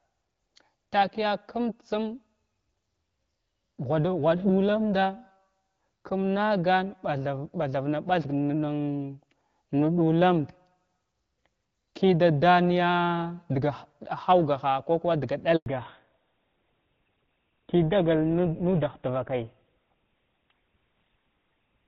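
A handover gap opens at 15.56 s, right after "kuwa daga", and lasts about 100 ms, until 15.66 s. The call was passed from one network to another, and no speech frames arrived during the switch, so the speech dies away within a few tens of milliseconds into silence until the new link starts.

A fallback to narrowband follows at 15.66 s and lasts to the end of the clip. Before this point the speech carries the wide top band of HD Voice, with the light coding texture that fits AMR-WB at around 12.65 kbit/s. After the handover it drops to an older narrowband codec, most plausibly GSM full rate at 13 kbit/s, and nothing remains above 4 kHz. The speech turns duller and rougher.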